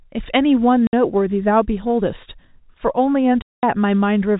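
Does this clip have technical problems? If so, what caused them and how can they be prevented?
Yes. The speech has packet loss filled with silence. Two gaps cut into it. The first runs from 0.87 to 0.93 s and lasts 60 ms. The second runs from 3.42 to 3.63 s and lasts 210 ms. Packets went missing in transit, and the receiver played silence in their place. Both gaps fit a whole number of 30 ms packets. Each hole starts and stops abruptly. The G.711 telephone coding keeps everything under 4 kHz. To prevent this, reduce network loss and use a jitter buffer with packet loss concealment instead of silence fill.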